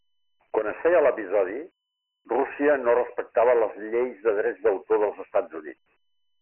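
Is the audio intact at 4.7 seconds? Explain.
No. At 4.7 seconds, as throughout the clip, the speech carries Dialogic VOX ADPCM coding. Each sample is stored as a coarse 4-bit step, which fits a 24 kbps, 6,000-sample-a-second stream. Nothing survives above 3 kHz, and heavy quantisation leaves a gritty hiss trailing the speech.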